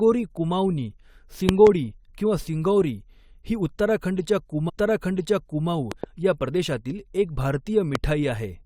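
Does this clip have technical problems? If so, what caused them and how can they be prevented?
Yes. Loud pops occur at 1.49 to 1.69 s (a pair, around 20 dB above the speech), at 5.92 to 6.06 s (a pair, around 15 dB up) and once at 7.95 to 7.97 s. They are likely voltage pulses from a plug, switch, static or driver glitch. Each appears as a tall spike in the waveform and a full-height vertical stripe on a spectrogram, with the speech continuing beneath. Secure connectors, avoid switching during capture and update audio drivers.

A stream segment is repeated right after "ही उत्तराखंडच्या": from 4.68 to 5.68 s the player replays about one second of speech, with a small blip at the jump back. On a spectrogram the same patterns appear twice in succession, joined by a thin vertical click. Deduplicating segments by sequence number in the player's queue would prevent this.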